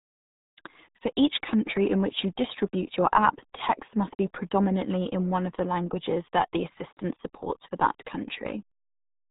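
Muffled, gargly speech with nothing above 3.8 kHz runs throughout, the heavy damage of the RealAudio 14.4 codec squeezing audio into about 8 kbit/s.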